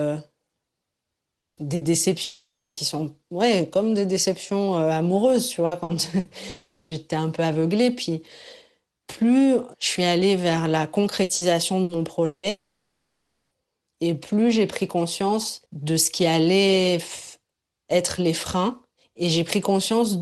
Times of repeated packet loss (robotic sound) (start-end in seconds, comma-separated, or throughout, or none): 5.65-6.28, 11.23-12.46